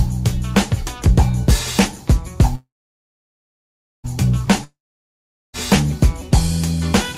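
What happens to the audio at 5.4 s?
At 5.4 s the audio is silent. This sits inside a gap from 4.64 to 5.55 s, likely a long network dropout. The last sound continues as a brief fading buzz or hiss, then 0.79 s of silence. Audio resumes at 5.55 s, missing 0.9 s.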